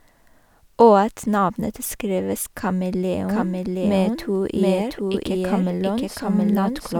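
A doubled audio track enters this speech recording abruptly at 3.29 s and runs to the end, with a roughly equal-level copy trailing about 0.7 s behind, likely from a second, slower capture path.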